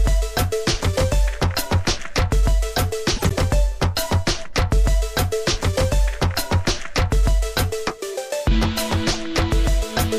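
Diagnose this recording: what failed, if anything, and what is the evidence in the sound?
Corrupt frames decoded at the codec stage put energy at the wrong frequencies: a chirping burst at 3.16–3.32 s, about −10 dBFS, and a briefer blip at 9.11–9.17 s.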